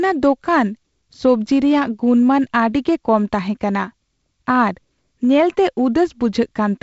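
No technical faults occur anywhere in this speech, which comes through G.722 wideband telephone coding with its light upper-band hiss and nothing above about 7.7 kHz.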